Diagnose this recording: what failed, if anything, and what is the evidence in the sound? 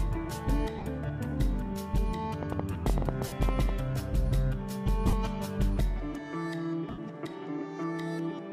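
The wireless link (network stage) dropped Bluetooth LE Audio frames at 0.78 to 0.86 s, 3.27 to 3.32 s, 5.07 to 5.13 s and 6.90 to 6.98 s, with about 45 to 75 ms lost each time. The LC3 decoder papered over the gaps by replaying the last spectrum with scrambled phase, so tonal content briefly smears into a noisy hash. It's longest and most audibly thinned in the last one.

There's a train of clicks from 2.43 to 3.70 s. That's around fifteen near-identical ticks at roughly 9.5 per second, unevenly spaced and peaking around 20 dB above the sound. The likely culprit is interference getting into the analogue wiring or a struggling interface injecting pulses. It overlaps the 3.27 s dropout.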